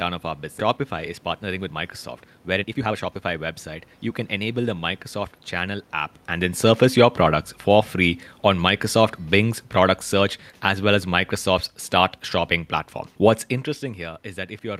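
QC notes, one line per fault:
0.59–0.61 s, skip ahead: Right after "of our" the audio jumps forward with no gap filled, so about a second of sound is simply missing. Audio was dropped, on the way or by the jitter buffer, while later material was already queued, and the two sides join almost directly.
0.77–4.41 s, jitter buffer speed-up: Playback runs at about 115% speed with pitch unchanged, sounding hurried. The buffer was holding too much audio, so the receiver repeatedly trimmed short pitch-period pieces, removing roughly half a second in total to bring the delay back down.
6.32–11.79 s, automatic gain falling: The level sinks gradually by about 6 dB, and the room noise drops with it, which separates this from the talker's own movement near 6 s. The automatic gain control judged the input too loud or its background noise too strong and eased its gain down over these five seconds.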